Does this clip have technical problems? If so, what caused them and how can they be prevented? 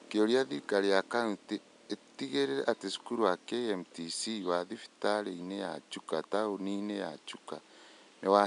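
No technical faults are audible in this speech, and the faint room noise, about 33 dB below the speech, belongs to the recording space rather than the system, so nothing needs preventing.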